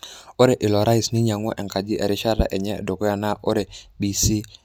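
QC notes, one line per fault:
No faults heard.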